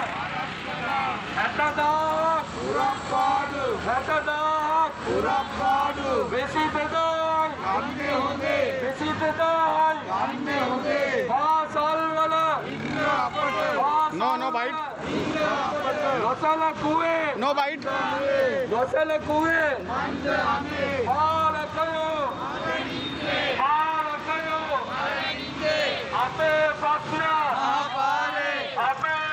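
Resampler restarted on every block, throughout: the audio was converted in separate 100 ms blocks during a 24 kHz to 48 kHz upsample, so each block edge lacked its true neighbouring samples. That boundary error ticks steadily at 10 Hz whenever signal is present.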